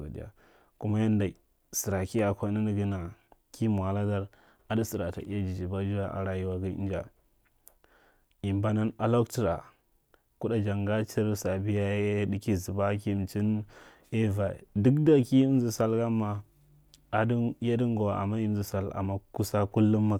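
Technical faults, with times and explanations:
18.82 s, underrun with held sample: the output briefly ran dry, freezing the waveform flat for about 0.67 ms. With nothing lost, playback resumes softly.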